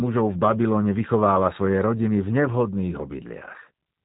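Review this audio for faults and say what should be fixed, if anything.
G.729 codec damage runs throughout: nothing above 3.8 kHz, with plainly audible rough, synthetic speech, consistent with an 8 kbit/s model-based vocoder. Carry the call on a wideband codec at a higher bitrate.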